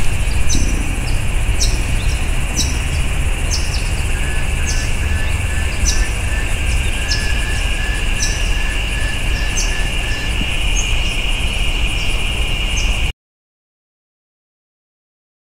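An audio dropout to silence begins at 13.11 s and runs to the end, about 2.4 s of silence with no room tone. The sound cuts off abruptly, most likely because the input signal was lost while recording continued writing silence.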